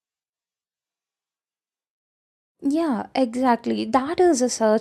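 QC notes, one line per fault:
0.85–2.61 s, switch to a distant microphone: the close microphone's signal likely dropped out here, leaving a pickup set further from the speaker. The speech turns roomy and hollow the instant it starts, thins in the bass, and falls by about 5 dB, while room noise rises to sit only around 30 dB under the speech. At 2.61 s the close, fuller sound snaps back just as abruptly.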